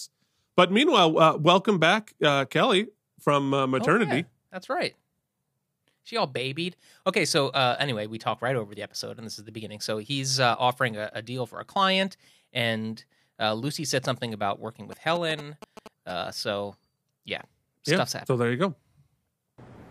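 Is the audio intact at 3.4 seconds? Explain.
Yes, the speech at 3.4 seconds is intact, with no fault audible at that moment.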